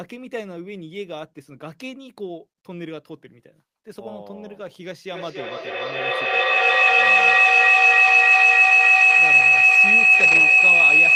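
From 5.07 s to the end, a feedback howl builds: the sound loops between a loudspeaker and a microphone in the same room, gaining level each pass. Unlike a decaying echo, the repeats swell into a tone near 3 kHz, with the loop repeating roughly every 300 ms and peaking about 18 dB above the speech.

From 10.19 to 10.41 s, beneath the howl, is a lost packet rebuilt from error correction. About 120 ms, which fits six 20 ms packets, was replaced from low-bitrate copies carried in later packets. Unlike concealment of an outright loss, there is no gap, only briefly rougher, noisier speech.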